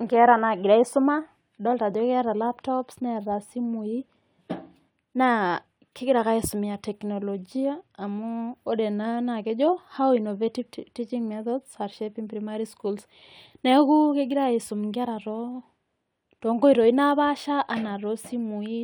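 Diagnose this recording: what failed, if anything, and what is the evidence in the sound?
Nothing failed; no stage shows any fault here.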